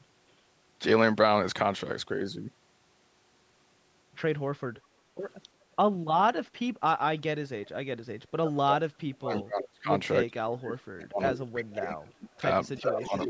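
Echo leak first appears from 4.76 to 5.34 s and again briefly from 7.64 to 7.69 s. A faint delayed copy of the speech, about 30 dB below it, trails the original by roughly 350 ms. The likely cause is a far end playing the call on a loudspeaker, where the echo canceller failed to remove the returning sound. The leak comes back at 9.37 to 9.42 s and 11.36 to 11.40 s, then runs continuously from 12.1 s to the end. Its delay creeps out to about 370 ms and its level climbs to about 15 and then about 10 dB below the speech, so the echo grows steadily more obvious.

Speech suppressed in double talk runs from 8.32 s to the end of the clip, overlapping those later echo bursts. The talker's speech dips and breaks up in pieces, falling by as much as about 35 dB, across roughly four seconds in total. This is likely the echo canceller being unable to tell the local talker from loudspeaker echo while both sides spoke, and turning both down together.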